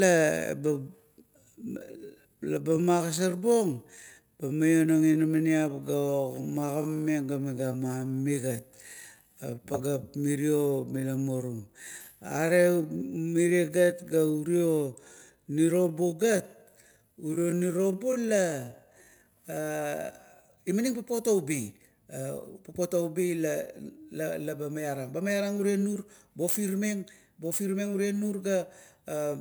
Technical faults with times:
0.00-20.58 time-stretched section

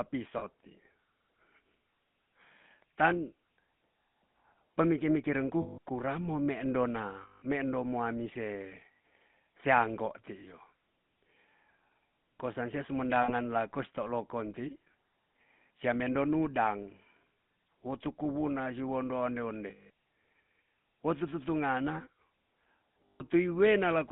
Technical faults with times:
0.00-24.12 GSM full-rate codec
0.38-0.45 lost GSM frames
5.62-5.78 lost GSM frames
7.22-7.43 lost GSM frames
8.94-9.00 lost GSM frames
13.22-13.32 lost GSM frames
19.70-19.90 lost GSM frames
23.06-23.23 lost GSM frames

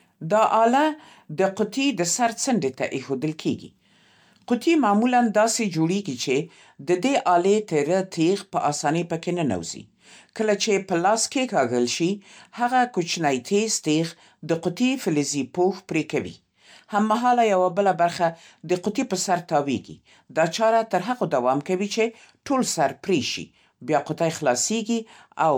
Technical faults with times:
0.00-25.58 generation loss

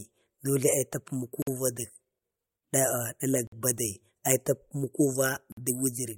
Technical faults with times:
1.42-1.47 gap between chunks
3.47-3.52 gap between chunks
5.52-5.57 gap between chunks

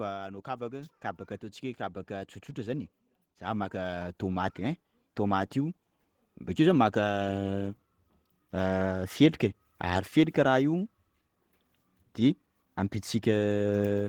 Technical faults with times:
2.07-5.84 automatic gain rising

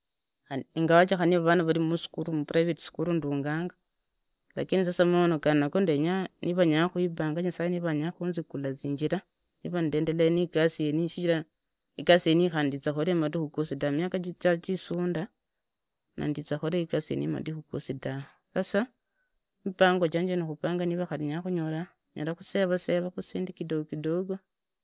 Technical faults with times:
none

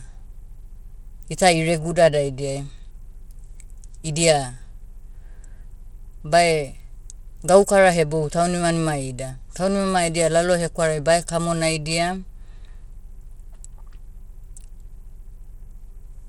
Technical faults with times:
0.00-16.28 Bluetooth SBC compression

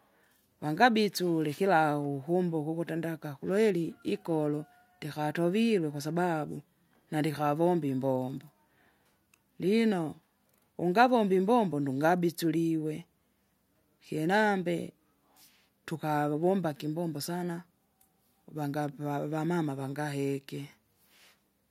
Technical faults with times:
none

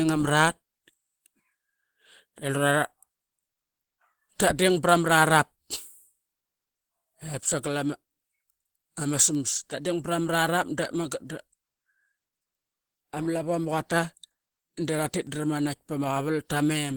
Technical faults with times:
0.00-16.97 Opus compression

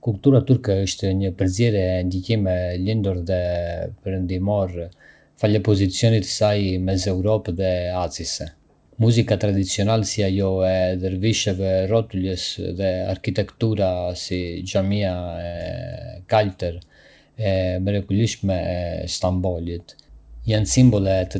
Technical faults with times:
15.46-15.56 short stall from a late packet
17.51-18.15 jitter buffer speed-up

